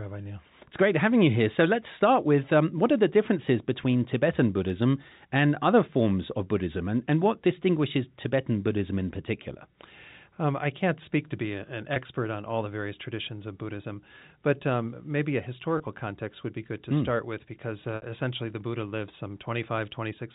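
Packet loss with pitch repetition occurs at 11.94–11.96 s, 15.78–15.80 s and 17.96–18.02 s. The receiver fills each gap by repeating the last pitch period. The two 20 ms gaps sound like a brief buzzy hold, and the 60 ms gap holds longer before the speech cross-fades back in over the band-limited telephone sound.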